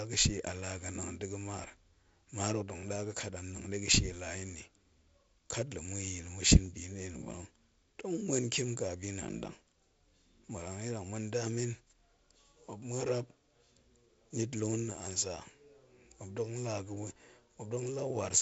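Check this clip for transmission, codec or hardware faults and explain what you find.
Checking this clip turns up no faults to explain.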